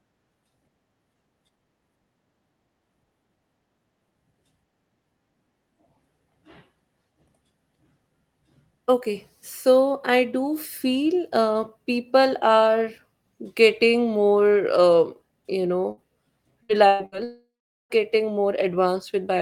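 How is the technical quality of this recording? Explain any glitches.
The recording has clear network glitches clustered near the end. The audio is band-limited to about 12 kHz, as expected from an Opus call path.

Burst of packet loss: at 15.91–16.00 s, 16.63–16.72 s, 16.87–17.03 s and 17.06–17.15 s. Short runs of packets never arrived in time. The receiver filled each gap by extending the last sound and fading it. You hear a brief buzz or hiss. About 60 ms of speech is skipped each time, about 120 ms in the third.

Long network dropout: from 17.24 to 17.93 s. The sound stretches into a fading buzz or hiss, then goes silent for about the last 0.4 s. Speech resumes later, with about 660 ms lost. The likely cause is the network delivering no audio for that stretch. The receiver's concealment could only cover the start of it.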